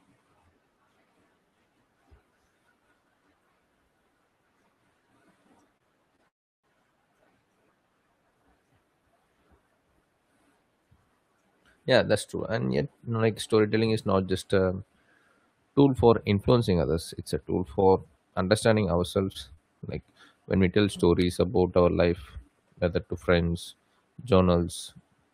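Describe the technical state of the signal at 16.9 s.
At 16.9 s the speech signal is intact, with no audible fault at that moment.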